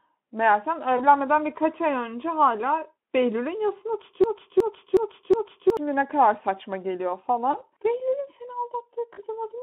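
VoIP packet loss concealed by the speech codec first appears at 0.97 to 1.06 s. A gap of about 20 ms, which fits one lost frame, is filled by the decoder stretching its last pitch and filter into a short buzzy or noisy smear. Because each frame builds on the one before, the distortion lingers past the gap. The band-limited Speex telephone sound, roughly 200 Hz to 3.4 kHz, carries through it.

A broken-record loop runs from 4.24 to 5.77 s: a 0.37 s fragment repeats exactly, back to back, four times. The likely cause is a stalled player or stream that kept resending the last fragment it held. The audio that belonged in that span never plays.

The concealment returns at 7.51 to 7.56 s, again fitting a single lost 20 ms frame. It comes back at 9.13 to 9.20 s, where a longer gap of about 40 ms gives a more drawn-out, fading buzz or noise.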